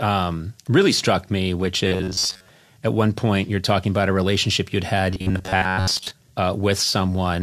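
Robotic sound from repeated short buffers occurs at 1.87–2.49 s, after "really struck me which", and 5.11–6.11 s, after "about a relationship you'd". New audio likely arrived too seldom, so most of the sound is replaced by repeats of a 10.7 ms slice, forcing a rigid 93.8 Hz metallic buzz.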